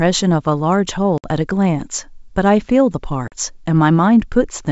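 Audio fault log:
1.18–1.28 s and 3.28–3.34 s, packet loss on an ADPCM call: two hard-edged holes of silence, about 60 ms and 40 ms of lost audio, which fits roughly three and then two missing packets. The decoder's adaptive predictor and step size fall out of step with the sender's during each gap. The speech therefore resumes slightly distorted, then settles within some tens of milliseconds. The G.722 wideband coding carries the speech up to 7 kHz.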